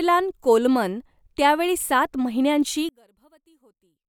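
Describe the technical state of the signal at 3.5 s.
At 3.5 s the signal is in a stretch from 2.89 s to the end at 4.09 s where one channel has likely been inverted, its polarity flipped against the other. When the two channels are summed to mono, everything they share cancels, and centred speech is almost entirely common to both. The speech drops by about 35 dB, leaving only a faint residue of whatever differed between the channels.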